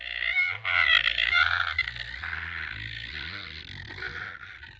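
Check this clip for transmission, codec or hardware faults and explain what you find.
Nothing faulty can be heard in the signal, which has gone through a call's usual microphone processing, with the lowest bass trimmed away and no content above 8 kHz, both normal for that path.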